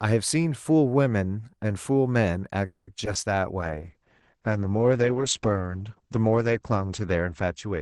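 At 2.65 s the speech stops moving forward for about 0.24 s. This is a call audio freeze. The last sound is stretched into a fading buzz for about 220 ms, with roughly 20 ms of near silence. The likely cause is packets held up in transit, so the jitter buffer ran dry. When they arrive, speech resumes exactly where it left off. Nothing is lost. The call now runs about 220 ms later than before.

Two short concealed packet losses follow, at 3.05 to 3.08 s and 3.14 to 3.17 s. Each is a brief smear or wobble in the speech. In each, about 20 ms of audio never reached the decoder. The receiver covered the hole by extending the preceding sound for about 10 ms, then blended back into the real signal. The gaps are tiny, but a short consonant could be swallowed.

From 3.61 s to the end, the sound turns coarse and duller. This is a call bitrate drop. The call's bandwidth estimate fell, and the Opus encoder was told to spend far fewer bits. 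The change in quality fits a fall from around 40 kbps to around 9 kbps. The top of the spectrum also narrows. The cut-off moves down from 12 kHz to 8 kHz. The lowest rate holds for about 2.5 s, with no recovery before the clip ends.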